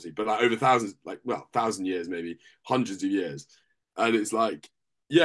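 No technical faults are audible.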